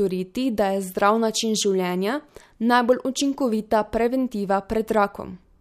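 No technical faults are audible.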